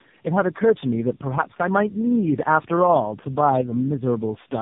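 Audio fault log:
throughout: tandem speech coding. The speech sounds like three low-rate speech codecs in a row, each re-coding the last one's damage, so it comes out rough, muffled and warbly, with nothing above 3.7 kHz. The last stage suggests AMR-NB.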